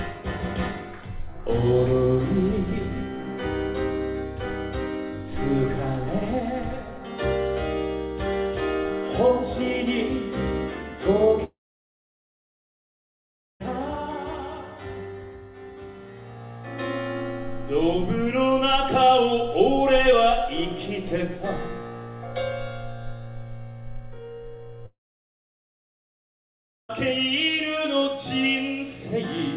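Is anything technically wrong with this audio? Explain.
Yes. There are two long network dropouts, from 11.44 to 13.62 s and from 24.86 to 26.91 s. Each lasts about 2 s. The likely cause is that packets stopped arriving and the receiver had nothing to play. It briefly stretches the last sound into a fading buzz, then goes silent for about 2 s. When the audio returns, the lost section is simply gone. Throughout, nothing is heard above 4 kHz, which fits a G.711 mu-law call path.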